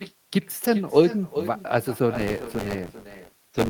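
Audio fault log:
Throughout: echo with no canceller. Each phrase returns as a quieter, thinner copy about 13 dB down and roughly 0.4 s late, picked up by a far-end loudspeaker and sent back unremoved.
2.14–3.70 s: buffer tearing. A robotic rattle at 93.8 Hz is heard under the sound. Writer and hardware have slipped, so a small slice of each buffer repeats audio about 20 ms old, which fits a 512-sample buffer.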